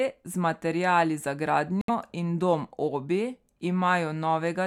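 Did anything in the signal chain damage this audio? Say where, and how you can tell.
Yes. Just after "z materiali za", the speech cuts to silence from 1.81 to 1.90 s. When the sound returns, it has skipped ahead rather than picking up where it stopped. This points to the wireless playback link, most likely a Bluetooth dropout. Packets arrived too late for the headphones and were discarded. The lost audio, about 70 ms, fits roughly three missing frames, so the output stayed silent until valid packets arrived.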